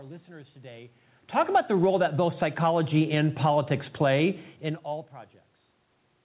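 From 1.77 s to 4.49 s, after "about the" and up to "in all", automatic gain rising lifts the level by about 6 dB. The gain control judged the input too quiet and raised it gradually, so voice and room noise swell together, unlike the talker's own movements near 1 s and 4.5 s, which change only the voice.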